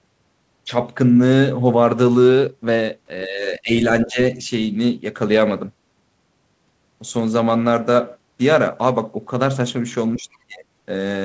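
From 3.26 to 3.72 s, 4.05 to 4.19 s and 10.16 to 10.65 s the speech dips, most deeply in the last, likely speech suppressed in double talk as an echo canceller ducked the talker. The waveform narrows there, and the spectrogram thins below its 8 kHz ceiling.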